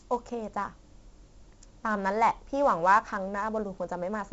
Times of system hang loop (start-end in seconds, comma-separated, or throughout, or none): none